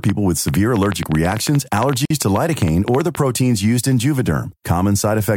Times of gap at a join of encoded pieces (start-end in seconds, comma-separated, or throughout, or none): 2.05-2.10